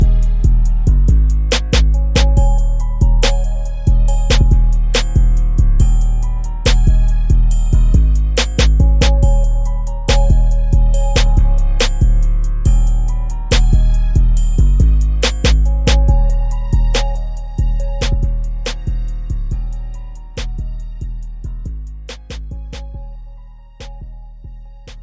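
No technical faults can be heard anywhere in the recording.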